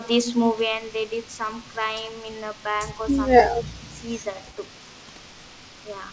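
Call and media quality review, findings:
Speech dips, 3.62–3.88 s: level falls by about 15 dB at the deepest point, with roughly 0.2 s of sound affected, then recovers. Likely speech suppressed in double talk: the echo canceller likely misread near-end talk overlapping far-end playback as echo and attenuated both. Call path audible as G.722, band-limited to 8 kHz, consistent with 64 kbps.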